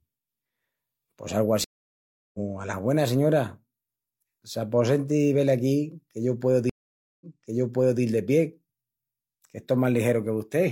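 At 1.64 s the speech drops into a stream reconnect. The connection broke, and a fresh decoder restarted mid-stream after 700 ms of silence, resuming roughly half a second further on, so some speech is skipped. A second reconnect follows "que yo pueu" at 6.70 s: 515 ms of silence, then playback jumps back 811 ms and repeats material before "de pie" around 8.02 s. On a spectrogram each shows as a blank vertical band, with the waveform flat and then swelling back as the first frames fade in.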